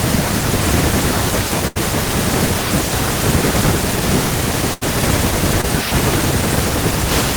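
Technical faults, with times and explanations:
1.67–1.77 s and 4.73–4.83 s, burst of packet loss: twice, around 80 ms of the speech just didn't arrive in time. The receiver stretched the last sound and faded it over that stretch, so you get a brief held buzz or hiss, then speech picks up with that bit gone.
5.61–5.65 s, short concealed packet loss: a much smaller hole, roughly 20 ms, that the decoder papered over by carrying the previous sound forward and blending back in. It comes across as a quick smear or wobble.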